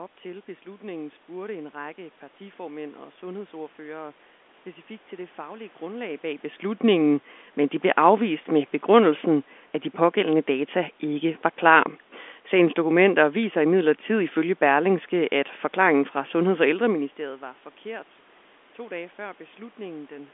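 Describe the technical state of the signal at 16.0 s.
At 16.0 s the signal is intact, with no technical fault at that moment.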